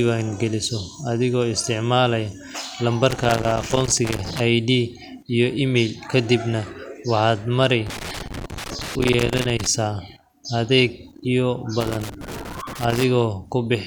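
Loose connector crackle bursts in at 3.1–4.4 s, 7.9–9.7 s and 11.8–13.0 s: a worn contact chopping the speech into irregular scratchy crackle.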